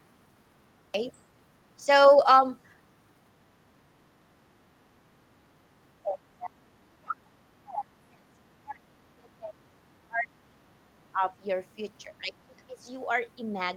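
A speech recording with a cut-off start: digital silence runs to 0.94 s, then the speech enters abruptly mid-sound with no natural onset, as if capture began late. The speech level then dips repeatedly: a brief drop of about 10 dB at 1.82 to 1.88 s, deep gaps of about 35 dB between 6.06 and 9.58 s, about 30 dB between 9.9 and 11.31 s, and about 20 dB between 12.08 and 12.89 s. This is likely speech suppressed in double talk, with an echo canceller attenuating the talker while the far end spoke.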